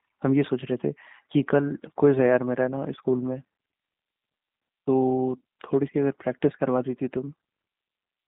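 From start to finish the speech carries the sound of a G.729 codec. Everything sits between about 150 Hz and 3.7 kHz, and the slightly rough, synthetic texture fits an 8 kbit/s G.729A-type coder. Each short frame is rebuilt from a vocal tract filter, a pitch predictor and a few pulses rather than the actual waveform. On a spectrogram the energy stops sharply near 3.7 kHz and the harmonics look smeared and grainy.

At 3.94 s there is a brief dropout of about 10 ms, consistent with a single lost frame: VoIP packet loss concealed by the speech codec. The decoder filled the gap by extending its last pitch and filter settings at reduced gain, so the sound is briefly stretched and dips. Because later frames build on that guess, the sound stays weak or distorted for tens of milliseconds afterward. The waveform shows a short amplitude sag.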